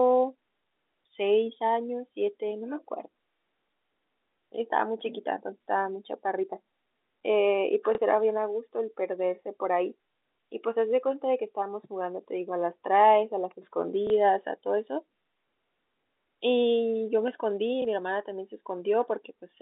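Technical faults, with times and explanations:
7.95–7.98 s, 14.07–14.10 s and 17.82–17.85 s, packet loss with last packet repeated: each spot has a small blip, a 30 ms slice of speech played twice. That points to one lost 30 ms packet each time, which the receiver covered by replaying the previous packet.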